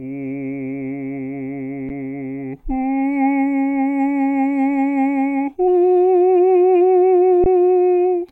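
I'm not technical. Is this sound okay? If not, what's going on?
No. An underrun with held sample happens briefly at 1.89 s and again from 7.44 to 7.46 s. Playback ran out of music data, so the output froze on its last value for 10 and then 20 ms. The music resumes where it paused, so each dropout ends softly.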